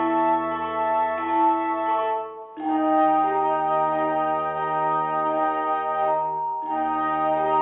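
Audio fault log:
No technical fault can be heard anywhere in the audio; the signal stays steady and intact.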